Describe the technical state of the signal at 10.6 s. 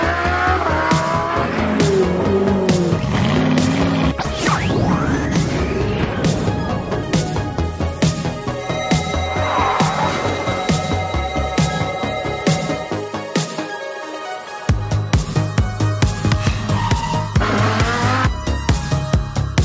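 At 10.6 s the audio is intact, with no fault present, only the ordinary call microphone processing, which leaves nothing above 8 kHz.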